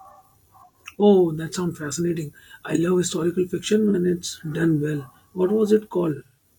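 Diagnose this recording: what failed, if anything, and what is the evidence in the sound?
AAC frame loss with concealment, in the codec stage as the stream is decoded. At 3.90 to 3.95 s, between "I love historical fiction" and "it's done well", a brief smeared, phasey patch replaces the audio. Its length fits a single lost frame of about 43 ms. A second fault at 6.15 to 6.43 s loses about 171 ms, scattered over 256 ms, with the longest run around 150 ms. The decoder fills each gap from the last good spectrum, so the sound blurs instead of dropping out.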